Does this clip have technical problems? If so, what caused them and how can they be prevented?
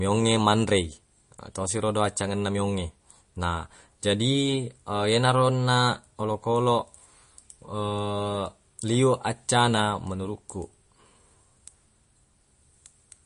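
Yes. Throughout the speech the sound is watery and swirly, with a metallic chirp on s sounds and softened consonant onsets, and nothing comes through above 10.6 kHz, so the top end is dull. The likely cause is MP3 compression at a starved bitrate, which fits roughly 40 kbps: the encoder cut the treble at a fixed point and let weak frequency lines flicker on and off between frames, producing the swirl and chirps. To prevent it, keep the original uncompressed file or encode at 128 kbps or higher.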